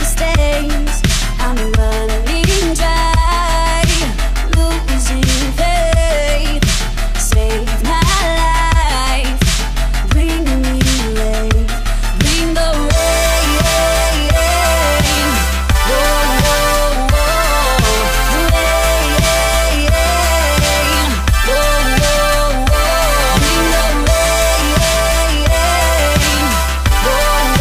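Nothing is technically wrong with the audio in this clip.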